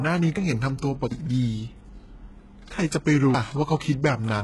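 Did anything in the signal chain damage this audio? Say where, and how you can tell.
Yes, at the codec stage. Throughout the speech the damage is heavy, and the spectrum stops dead at 11.5 kHz. The treble below that limit is not the original but a rebuilt copy, with harmonics that fail to line up across the crossover. This points to HE-AAC compression, likely at a very low bitrate around 12 kbps. Only the lower band is actually coded, and spectral band replication transposes it upward under a coarse envelope.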